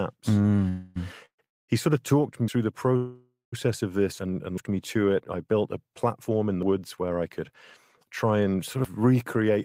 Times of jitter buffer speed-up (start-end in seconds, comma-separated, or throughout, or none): 9.36-9.58